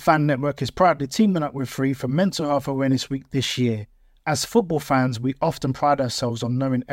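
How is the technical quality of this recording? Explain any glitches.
No technical faults are audible.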